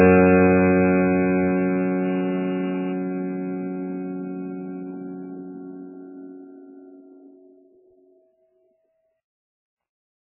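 MP3 compression, throughout: the music has nothing above 2.9 kHz and heavy, watery, swirling damage, likely from a very low bitrate, around 8 kbps.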